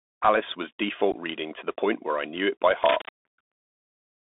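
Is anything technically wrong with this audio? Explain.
Yes. The whole clip carries Bluetooth CVSD headset codec damage. The speech sits in a narrow band of about 250 Hz to 3.6 kHz, which fits a 64 kbit/s CVSD link. CVSD encodes one bit per sample as an up or down step that adapts in size, and the steps cannot follow fast high-frequency movement. Sibilants turn scratchy, loud bright sounds distort, and a granular hiss sits under the speech.

From 1.12 to 1.14 s there is unconcealed Bluetooth headset packet loss. About 15 ms of audio, roughly a couple of packets, never arrived and silence or an idle pattern took its place. The result is a short hole with hard edges, heard as a brief dropout in the speech.

From 2.82 to 3.10 s a burst of rough, uneven rustling lies over the speech at a level only a few dB below it. This is likely cable scratch noise, from a worn cable or connector being moved so that its contact resistance changes rapidly.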